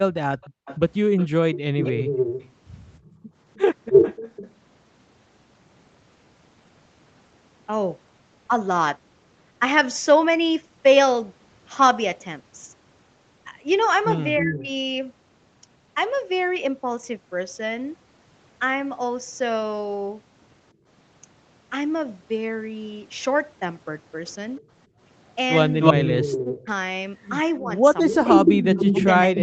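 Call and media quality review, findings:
Echo leak, 0.15–4.51 s. Delayed copy of the speech trails the talker by about 0.31 s, a few dB below it. Likely cause: far-end loudspeaker echo not fully cancelled. Echo leak again at 14.37–14.59 s, same delay, well below the speech. Echo leak returns from 25.8 s to the end, same delay, roughly as loud as the direct speech. The canceller lets residual echo through and sends it back.

Background gated by the echo canceller, 0.5–3.33 s. Room tone drops out in brief holes totalling roughly 0.3 s, deepest about 40 dB down. Canceller clamped the mic while the loudspeaker played. Shorter dips at 20.74–20.87 s, about 15 dB, and 24.87–24.99 s, about 17 dB. Background returns once the suppressor releases.

Speech suppressed in double talk, 1.48–1.96 s. Near-end speech cuts out in pieces, deeply attenuated, about 0.4 s affected in total. Likely cause: canceller mistook overlapping talk for echo and ducked both. 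Milder dip at 14.41–14.69 s, roughly 20 dB. Long stretch 26.08–29.41 s, shallower ducking, about a second affected overall. Speech here sits against the 8 kHz Opus call band.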